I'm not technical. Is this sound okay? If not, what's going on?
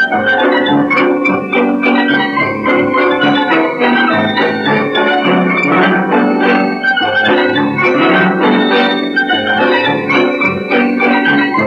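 No. A mains buzz runs through the whole clip: a steady, raspy buzz from electrical interference locked to the 60 Hz power supply. Unlike a smooth low hum, it sounds gritty because its sharp spikes carry overtones reaching up to several kilohertz.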